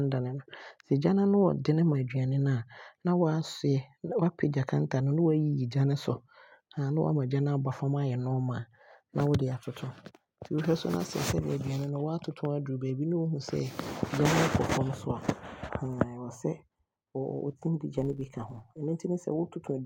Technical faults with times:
17.98-18.79 filter restarted on every block

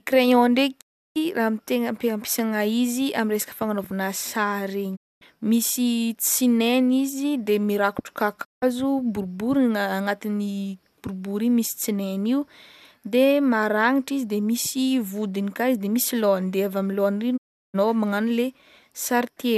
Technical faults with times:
0.80-1.17 digital broadcast dropout
4.95-5.23 digital broadcast dropout
8.43-8.64 digital broadcast dropout
17.36-17.76 digital broadcast dropout

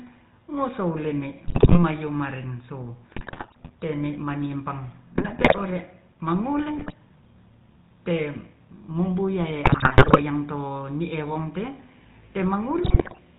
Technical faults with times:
0.00-13.38 GSM full-rate codec
1.48-1.84 GSM bit errors
3.10-3.70 GSM bit errors
5.16-5.63 GSM bit errors
6.76-6.93 GSM bit errors
9.64-10.23 GSM bit errors
12.84-13.19 GSM bit errors

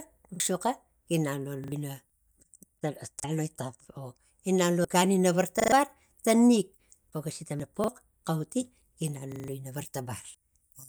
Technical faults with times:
0.36-0.40 repeated buffer
1.64-1.72 repeated buffer
2.10 audio missing between chunks
3.20-3.24 repeated buffer
4.85 audio missing between chunks
5.60-5.72 repeated buffer
7.60 audio missing between chunks
7.84-7.88 repeated buffer
9.32-9.48 repeated buffer
10.35 audio missing between chunks

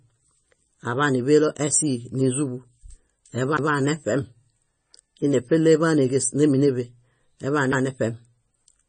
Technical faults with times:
0.00-8.89 MP3 compression
3.57 CD skip

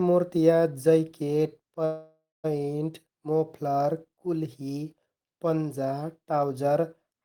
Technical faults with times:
1.85-2.46 call audio freeze

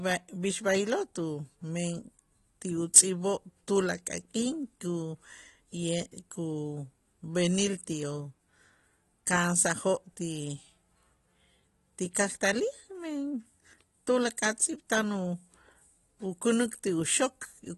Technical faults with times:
0.00-17.77 AAC compression

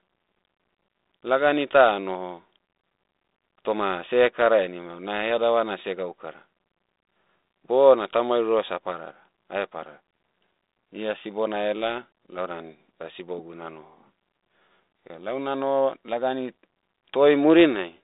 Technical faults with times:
none

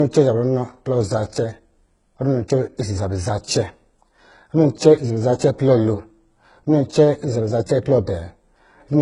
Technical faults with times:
0.00-9.01 low-bitrate audio saved at a high bitrate

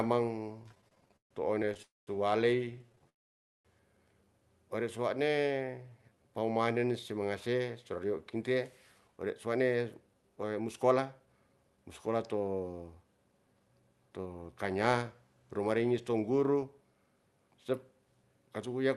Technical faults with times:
0.63-1.80 repeated stalls (stutter)
1.82-2.09 call audio freeze
2.65-3.07 repeated stalls (stutter)
3.09-3.67 call audio freeze
4.97-6.93 jitter buffer slow-down
9.01-15.03 jitter buffer speed-up

